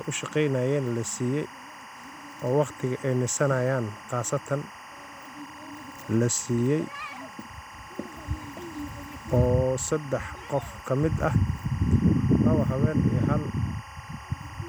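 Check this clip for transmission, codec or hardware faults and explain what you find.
One fault runs through the speech. Timecode bleed is present from start to finish. Linear timecode leaks in from nearby wiring. Its square wave flips between about 1 and 2 kHz. This makes a chirping warble well below the speech, fitting 24-frame code.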